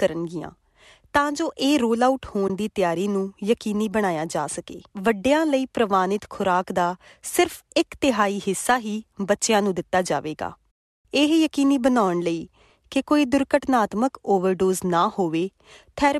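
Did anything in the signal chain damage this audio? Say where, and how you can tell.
Yes, at the network and codec stage: an AAC frame loss with muting at 2.48 to 2.50 s leaves a short hole in the speech, about 20 ms long, which points to roughly two lost frames. The decoder zeroed the missing spectrum, and its overlapping windows fade the sound out and back in, so the gap has soft edges. A buffer underrun or sample dropout would end with an abrupt step and a click. The light coding texture elsewhere is likely from low-delay AAC.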